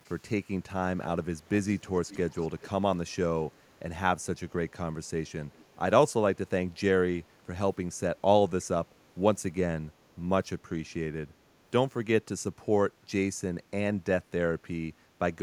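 Speech with echo leak: a delayed copy of the speech, trailing by 308 ms, returns at 0.05–0.13, 1.01–1.07, 1.69–2.70, 3.52–3.57 and 5.54–5.64 s, ranging from about 40 dB to 20 dB below the speech. The likely cause is a loudspeaker-side echo canceller letting residual microphone pickup through.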